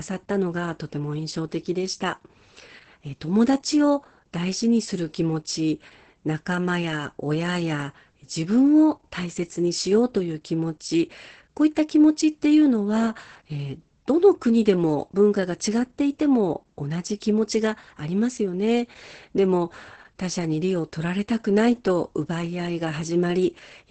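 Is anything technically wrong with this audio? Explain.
Yes. Throughout, Opus voice compression in its SILK mode starves this speech of bits, as a bitrate near 10 kbps would. The band stops near 8.6 kHz, leaving it muffled, hoarse and faintly robotic.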